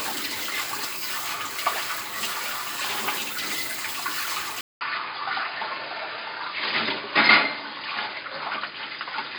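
Everyday sounds; at 4.61 s a 200 ms gap, then nothing above 5 kHz and a new noise floor about 30 dB down at unchanged level, likely an input switched to a poorer device rather than filtering.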